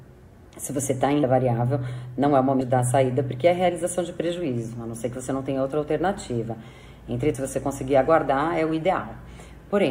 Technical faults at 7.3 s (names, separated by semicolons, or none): low bit depth without dither; compressed frames skipped